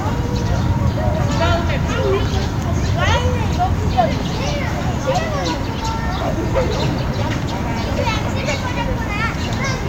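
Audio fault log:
No faults are heard in this recording of sounds. Nothing in it calls for a timed entry.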